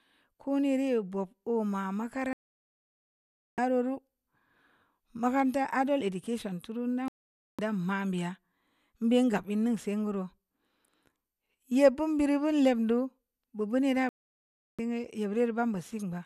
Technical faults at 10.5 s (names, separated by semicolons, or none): none